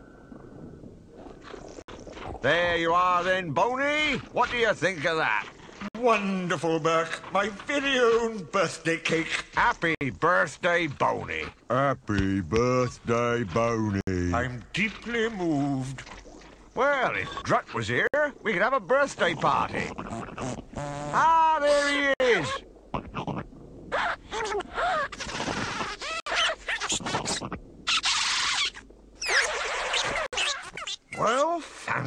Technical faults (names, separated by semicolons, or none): gap at a join of encoded pieces